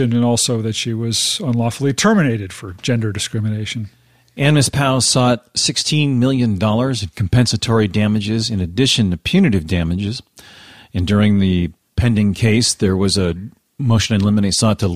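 No technical faults are audible in this recording.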